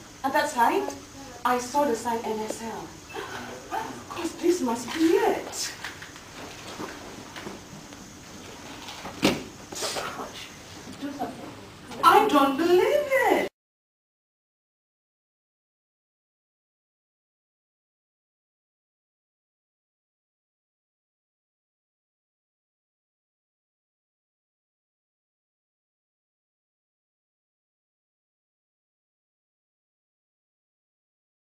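No technical faults can be heard anywhere in this recording.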